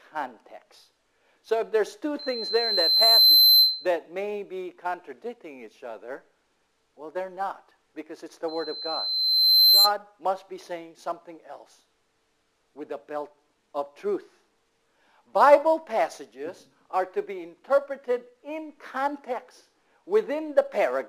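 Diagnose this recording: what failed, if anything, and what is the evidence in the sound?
Loudspeaker feedback squeal, in the playback-to-microphone loop. A 4.1 kHz tone swells at 2.19–3.87 s and 8.48–9.92 s. Loop gain passed one there.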